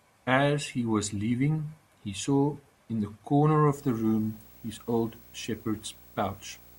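Video or display buzz enters at 3.73 s and runs to the end at 6.78 s: a display or video cable couples into the audio, adding a 59.94 Hz field-rate buzz with hash and a thin 15.7 kHz line tone, sitting roughly 25 dB below the speech.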